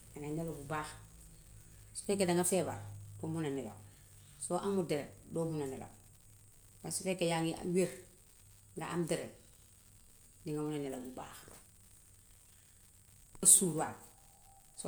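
Speech, with an unreliable data bit running through the whole thing: one bit in the samples keeps flipping at random, and each flip throws in a spike of the same size. You get a steady crackle, almost a fizz, that carries straight on through the pauses.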